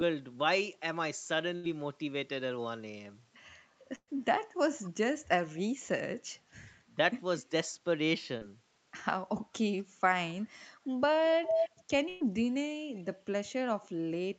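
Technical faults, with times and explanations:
1.55–1.65 s, 3.95–4.09 s and 12.09–12.22 s, burst of packet loss: runs of about 80, 120 and 120 ms never arrived in time. The receiver stretched the last sound into a fading buzz or hiss, with about 50 ms of silence at 3.95 s, before jumping ahead past the missing audio.
4.84–4.90 s, 10.41–10.46 s, 11.23–11.70 s and 12.95–13.15 s, echo leak: a copy of the speech returns about 230 ms late. It is about 25, 35 and 30 dB down in the short scraps, but as loud as the speech itself across 11.23–11.70 s. The likely cause is a far-end loudspeaker feeding a microphone whose echo canceller did not remove it.
8.37–8.43 s, short concealed packet loss: about 40 ms went missing, and the decoder filled 35 ms of it by extending the preceding sound before blending back. It is heard as a brief smear or wobble, and a short consonant there can drop out.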